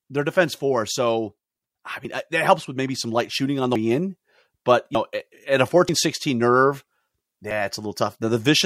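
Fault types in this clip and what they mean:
Dropped buffer (overrun): four points where speech skips ahead about a tenth of a second, likely overwritten input; no silent gap, unlike a dropout.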